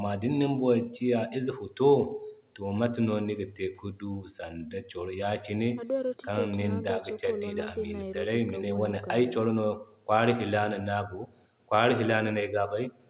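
No technical faults can be heard in this speech.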